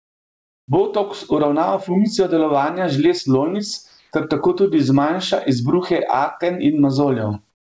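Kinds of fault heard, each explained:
Gain pumping: the background swells between phrases and ducks under loud speech, a swing of roughly 15 dB, likely from gain set too high feeding a fast limiter.
Comfort noise in place of the background: pauses at the start, around 3.9 s and at the end turn to flat, featureless hiss, likely synthetic fill from discontinuous transmission.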